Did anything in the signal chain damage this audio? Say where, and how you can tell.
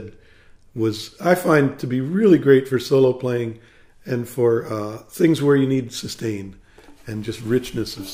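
No, nothing in the signal chain stood out on listening.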